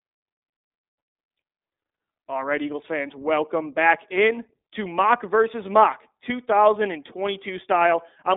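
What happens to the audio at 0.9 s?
At 0.9 s, as throughout, the speech carries iLBC codec damage: independently coded frames give a rough, synthetic texture and nothing above 3.8 kHz, unlike a clean band-limit.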